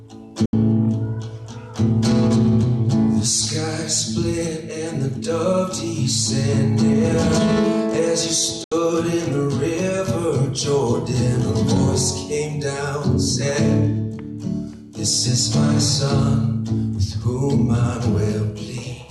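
A digital broadcast dropout hits the audio twice, at 0.46 to 0.53 s and again at 8.64 to 8.72 s. Each time the sound fades to silence within about 3 ms, stays muted for roughly 80 ms, then resumes further along. The receiver muted while it had no valid data, and the gap length fits about three consecutive frames failing their checksum. The programme material from those gaps is lost.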